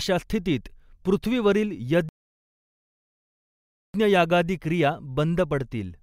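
Speech, with a rebuffering stall. At 2.09 s it drops to silence until 3.94 s, then resumes exactly where it stopped. Nothing is lost, but about 1.85 s is added.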